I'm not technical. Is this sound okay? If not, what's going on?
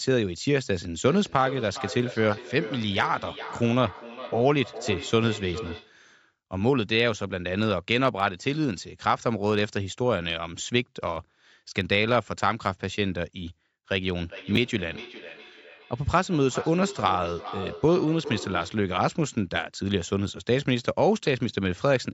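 No, there are two problems, and they overlap at one point.

The main one is a feedback echo between two devices. It shows up from 1.1 to 6.0 seconds and again from 14.27 to 18.88 seconds. The speech comes back as a quieter copy a bit under half a second later. That happens when two devices in the same room are on one call. One plays what the other's microphone sent, and that microphone picks it up again. Each device's echo canceller only removes its own playback, so the loop gets through. The first stretch is a little louder than the second.

The second is chunks out of order, a tiny glitch from 14.55 to 14.57 seconds, right inside that second echo stretch. A 10-millisecond slice of audio arrived one slot late and played after the slice that should have followed it. Nothing is missing, but the order is swapped, leaving three abrupt joins in a very short moment. You'd hear it as a quick scrambled blip rather than a gap.

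The thinner low end and the lack of anything very high-pitched come from the call's normal microphone processing.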